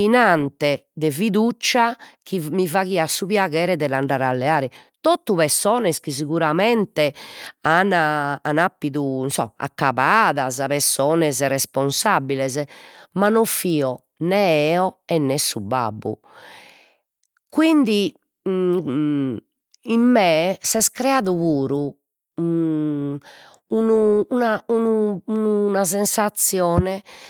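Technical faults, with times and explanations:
Nothing stood out on listening to this speech recording.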